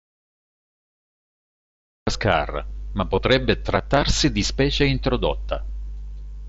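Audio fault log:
0.00–2.07 s, audio dropout to silence: the clip opens already in a hole of silence, not even room tone underneath, and the speech only arrives at 2.07 s, coming in mid-flow. That dead silence points to the input being lost, likely a dropped link or a mute somewhere upstream, with the recorder carrying on writing nothing. Whatever was said before 2.07 s simply isn't there to recover.
3.16 s, concealed Bluetooth headset packet loss: a tiny blip of about 15 ms where a couple of voice packets between headset and phone went missing, which fits two lost frames. The receiver papered over it by repeating a best-matching slice of the sound just before, so it's nearly hidden, just a slight warble as the real signal picks back up. The mSBC wideband path is working as it should, with speech running up to 8 kHz and a little light graininess on the louder bits.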